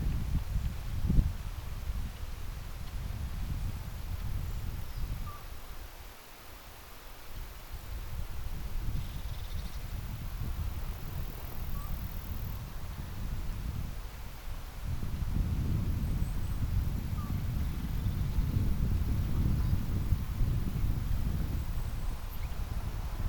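Nothing is technically wrong with this audio, since no fault can be heard anywhere in it.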